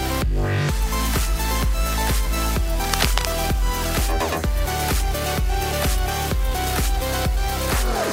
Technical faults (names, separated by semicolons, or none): cable scratch noise